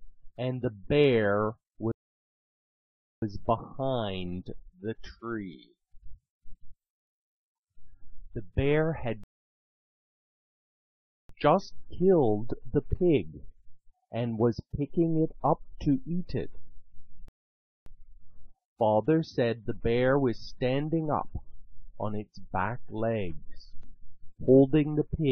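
Playback halts three times in this audio, each a rebuffering stall: silence from 1.92 to 3.22 s, from 9.24 to 11.29 s, and from 17.28 to 17.86 s, adding about 1.3 s, 2.1 s and 0.58 s respectively. In each case the player exhausted its downloaded buffer and waited for more data, then resumed at exactly the point it stopped. No material is skipped; the gaps only lengthen the running time.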